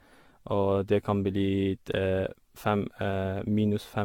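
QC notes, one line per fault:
Throughout: generation loss. The speech sounds swirly, smeared and hollow, with blurred consonant attacks and nothing above 17 kHz, more degraded than a single lossy pass at this quality would leave. This likely comes from about ten rounds of decoding and re-encoding, consistent with AAC-LC at around 96 kbit/s. Each pass requantises on a shifted frame grid, so quantisation noise and spectral holes build up and transients keep spreading across frames.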